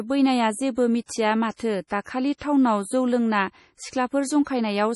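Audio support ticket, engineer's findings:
MP3 compression, whole clip: nothing above 11.4 kHz, heavy swirly artefacts on speech. Likely a low-bitrate MP3 encode, which fits something around 32 kbps. Encoder ran short of bits, chopped the top end and dropped weak frequency lines frame to frame.

Pre-echo, two spots: 1.04–1.09 s (57 ms spread) and 1.87–1.91 s (35 ms). Short hiss smeared ahead of sharp attacks. Same codec: block-wide quantisation noise sized for the loud onset leaks into the quiet lead-in before it.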